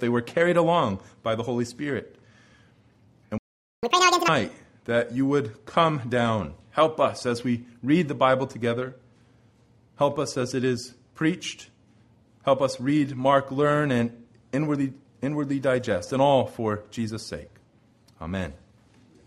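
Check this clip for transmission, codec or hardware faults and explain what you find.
Two linked playback faults occur just before the 4-second mark: a stall followed immediately by a fast catch-up.

Playback stall, 3.38 to 3.83 s: the sound cuts off mid-flow for about 0.45 s, most likely because the player ran short of data. On a waveform this is a flat, empty gap; the spectrogram shows a blank vertical band across all frequencies.

Catch-up at higher speed, 3.83 to 4.28 s: the player resamples its backlog at double speed, so the sound is rushed and raised by roughly ten semitones before snapping back. The spectrogram shows harmonics shifted upward and events compressed in time.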